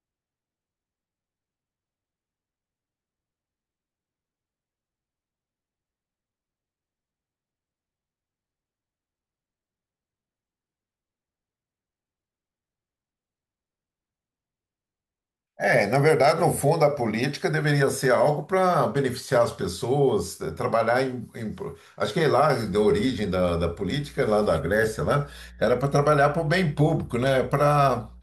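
A ground loop or nearby transformer couples the 60 Hz power line into the signal path from 22.58 s to the end. The result is mains hum, a steady low tone with some low harmonics sitting roughly 25 dB below the speech.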